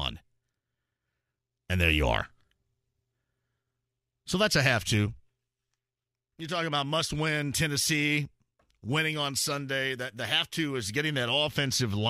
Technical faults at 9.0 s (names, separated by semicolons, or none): none